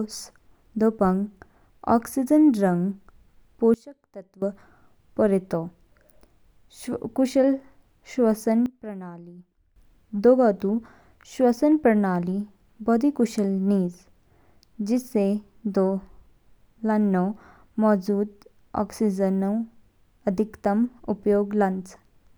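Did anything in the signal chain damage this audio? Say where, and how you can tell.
Yes. There are sudden gain jumps at 3.74 to 4.42 s and 8.66 to 9.76 s. The speech and the background noise drop together, by about 19 dB and then about 15 dB, and return abruptly. The likely cause is a digital gain step in the processing chain, applied without a ramp.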